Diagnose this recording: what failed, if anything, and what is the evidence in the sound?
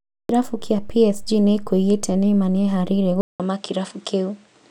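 At 3.21 s the speech breaks off for about 0.19 s. It returns duller, with nothing above 10.1 kHz and a new noise floor roughly 40 dB down. Level barely changes. The likely cause is an input switched to a poorer device at the driver stage.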